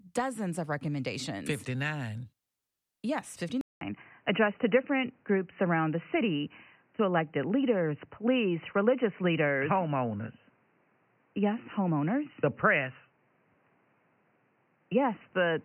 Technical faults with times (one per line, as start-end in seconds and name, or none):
3.61-15.64 input switched to a poorer device